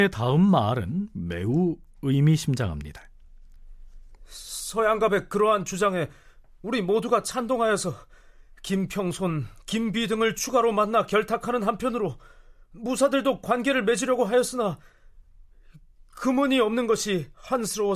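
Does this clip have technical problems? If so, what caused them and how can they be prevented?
No, no technical faults can be heard in this speech recording, so nothing needs preventing.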